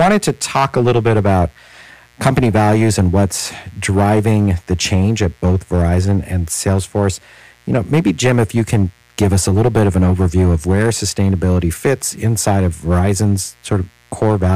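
A mains buzz runs under the speech from start to finish. It is built on 60 Hz. Something like a dimmer, rectifier or unshielded cable let switching spikes into the signal path, twice per mains cycle. Those sharp spikes produce a ladder of 60 Hz harmonics reaching well into the kilohertz range. The result is a steady, raspy buzz rather than a smooth hum. It sits roughly 40 dB below the speech, so it is quiet but always present.

Hard clipping is also present throughout. The speech is pushed about 13 dB beyond what one stage can carry. Every peak that exceeds that ceiling is sliced flat. Around one sample in twenty is affected. The flattened tops generate harmonics high up the spectrum that were never in the speech. With an overload this large, every loud syllable picks up a harsh, gritty fuzz, and the speech sounds strained and crackly on its peaks.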